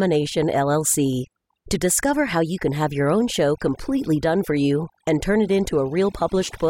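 Overdone noise removal runs through the whole speech clip. A noise reduction stage was set too strong. It pulls individual frequency bands down whenever they sit near its noise estimate. Quiet parts of the speech vanish with them. The background breaks into twinkling, warbling specks.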